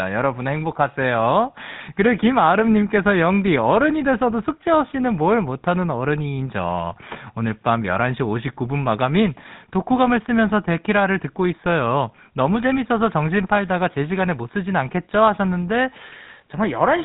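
Speech passed through the GSM full-rate codec for its whole length, consistent with a 13 kbps link: nothing survives above 3.9 kHz, and the voice carries a plainly audible buzzy, gravelly roughness.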